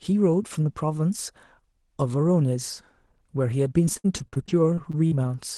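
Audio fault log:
3.85–5.13 s, repeated packet loss (robotic sound). The audio turns choppy in this stretch. Eleven short holes break it up, the longest about 64 ms. Each hole is filled by stretching the last received sound, so roughly a fifth of the span is patched rather than real. The gaps come close together, and the repeated patches leave pieces of the speech missing. The audio passes through a call codec with a top end near 12 kHz.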